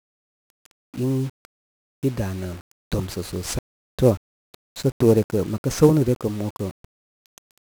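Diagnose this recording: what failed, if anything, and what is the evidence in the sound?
1-bit DFPWM compression runs through the whole speech recording, a failure at the codec stage. From start to finish the sound carries a dense, broadband fuzz with constant crackle, and the upper frequencies are swamped by hiss, leaving the speech heavily degraded. DFPWM encodes just one bit for each sample, which only tells an adaptive level to rise or fall. That crude tracking produces strong quantisation noise, consistent with a roughly 48 kbps DFPWM stream.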